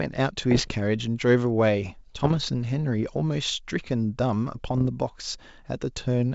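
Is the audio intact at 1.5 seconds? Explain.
Yes, the speech at 1.5 seconds is intact, carried through G.722 wideband telephone coding at 64 kbit/s with no fault at that moment.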